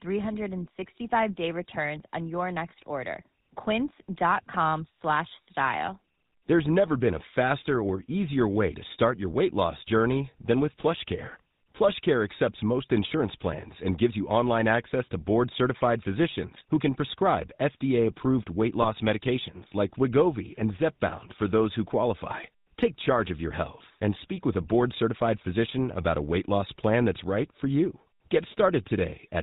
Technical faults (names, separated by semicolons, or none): GSM full-rate codec; lost GSM frames